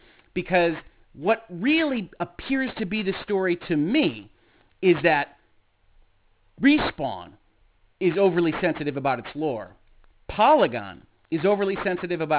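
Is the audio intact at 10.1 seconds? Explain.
No. At 10.1 seconds the speech sounds gritty and metallic, with sibilants smeared into harsh, unrelated tones, and the damage runs through the whole clip rather than starting there. This is aliasing. The sound points to a drop from 48 kHz to 8 kHz with no low-pass filter first, so content above 4 kHz folds back down below that edge and lands at wrong frequencies, fairly strong, roughly 15 dB under the speech itself.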